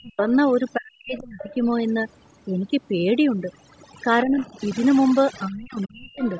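Overdone noise removal runs through the whole recording. The suppressor was pushed too hard, cutting individual frequency bands whenever they sat near its noise estimate. The background drops and breaks up into twinkling specks. Separately, the call's normal microphone processing leaves nothing above 8 kHz.

Speech suppressed in double talk comes next, from 0.02 to 0.27 s and again from 0.77 to 1.55 s. The speech dips very deeply, almost to nothing. This is likely an echo canceller that could not tell the talker from loudspeaker echo while both sides spoke, so it turned everything down.

The other side's voice leaks through from 1.39 to 1.55 s, at the end of that second dip. A second, quieter voice sits well below the talker, likely because the echo canceller left part of the loudspeaker playback in the microphone signal.

Double-talk suppression returns from 4.23 to 4.58 s as a milder dip. 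It comes back deeply from 5.47 to 6.24 s. The leakage reappears from 6.23 s to the end at 6.39 s, fainter than before.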